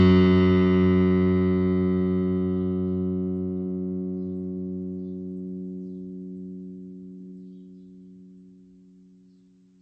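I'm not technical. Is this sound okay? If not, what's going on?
No. The music was likely squeezed hard by MP3 compression, which saves space by throwing away detail. From start to finish nothing survives above 8.2 kHz, so the sound is dull and muffled, with a watery, swirly quality and smeared attacks.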